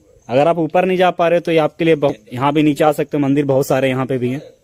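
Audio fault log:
2.09 to 2.11 s, skip ahead: playback jumps forward with no silence filling the join, so roughly 0.4 s of audio simply never plays and the two sides butt together. Unlike a dropout there is no gap or fill, just a sudden discontinuity where later material arrives early.
2.69 to 3.23 s, jitter buffer speed-up: over about half a second the sound runs at 106% speed while keeping its pitch, as the receiver trims short pitch-period pieces to shed excess buffered delay, around 40 ms in total. Unlike a skip, nothing is lost abruptly; it simply hurries.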